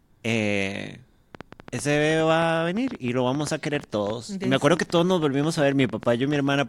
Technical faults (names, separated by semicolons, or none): train of clicks